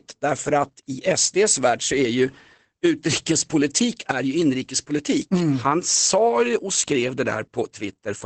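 Throughout the speech, Opus voice compression is plainly audible: the sound is muffled, hoarse and faintly robotic, as a linear-prediction coder rebuilds it from coarsely coded excitation, which fits roughly 12 kbps in SILK mode. A spectrogram shows a hard ceiling, empty above 8.5 kHz.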